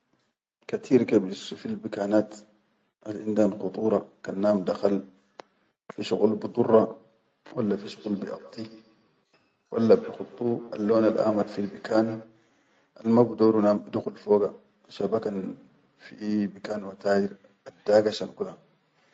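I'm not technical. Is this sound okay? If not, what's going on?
No. From about 7.63 to 12.37 seconds there is feedback echo between two devices. Two devices in the same room are on the call, and one is playing out what the other's microphone sent, so that microphone picks it up again. The speech comes back quieter at a steady spacing of roughly 0.15 seconds, thinner and more ringing. A room's natural echo would blur smoothly instead of repeating at a fixed beat.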